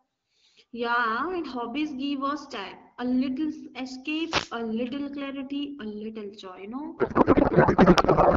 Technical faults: wireless microphone noise hit; codec payload misread

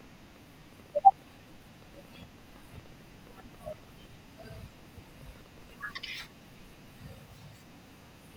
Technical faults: train of clicks

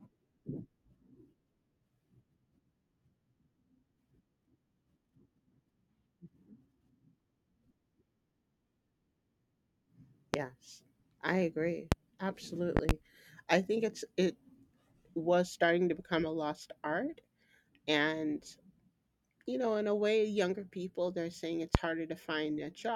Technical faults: loud pop

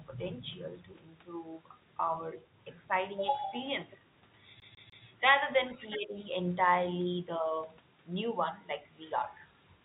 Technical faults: CD stuck on one turn; other side's voice leaking through; speech suppressed in double talk

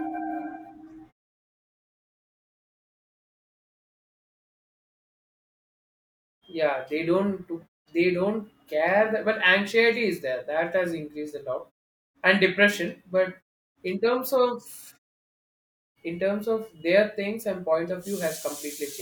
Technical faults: none

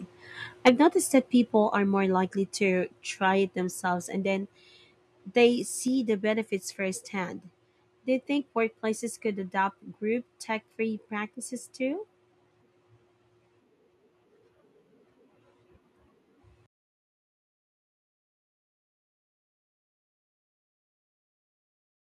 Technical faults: microphone overload; microphone volume stepped down

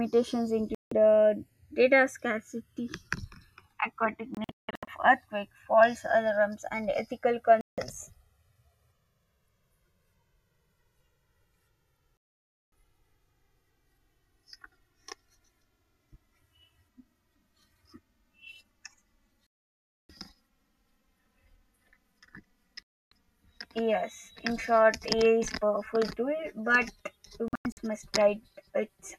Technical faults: channels drifting apart; digital broadcast dropout

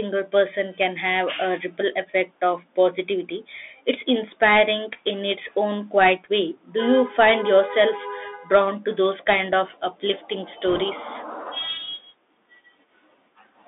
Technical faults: Bluetooth CVSD headset codec; bit errors on a Bluetooth voice link

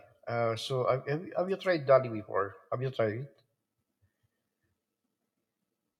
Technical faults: none

